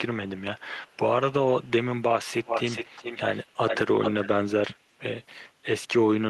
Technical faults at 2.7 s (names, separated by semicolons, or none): echo leak